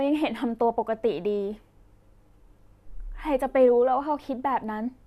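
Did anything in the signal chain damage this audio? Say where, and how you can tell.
No, nothing in the signal chain has audibly damaged this speech recording, and the signal holds together without any break, distortion or disturbance that could be traced to a stage.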